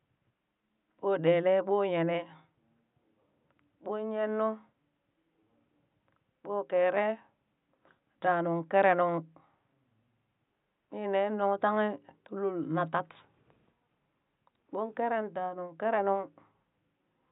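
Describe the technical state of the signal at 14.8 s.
At 14.8 s the speech signal is intact, with only the room's own background noise present, sitting about 55 dB below the speech.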